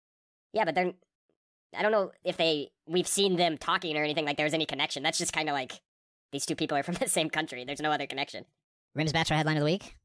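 From start to end, a wrong sample rate fault is present. The speech plays back faster than it was recorded, with no conversion. Speed rises 1.38 times and pitch climbs 5.55 semitones. Voices sound high and hurried. The ratio fits 16 kHz audio played at 22 kHz.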